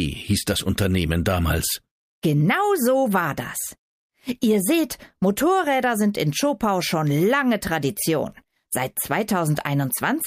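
No technical faults are audible anywhere in this recording.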